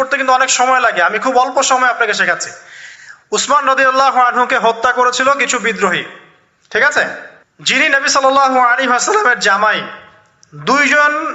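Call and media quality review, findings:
Gain pumping, throughout. Gain swings of around 10 dB. Likely input gain set far too high, fast limiter clamping every peak. Audio band stops near 8 kHz, consistent with call codec.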